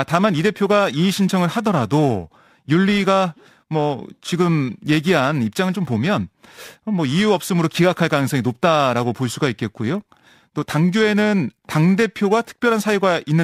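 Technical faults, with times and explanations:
Throughout: periodic clock jitter. The converter's clock is being wobbled at around 2 kHz, so every part of the speech picks up sidebands roughly that far above and below it, worst on the high-frequency content, giving a gritty, metallic edge that drops away in pauses.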